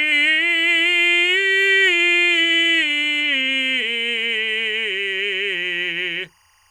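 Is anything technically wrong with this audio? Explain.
Yes, there's timecode bleed throughout the music: a 24-frame linear timecode square wave leaking in, chirping faintly between roughly 1 and 2 kHz, about 40 dB down.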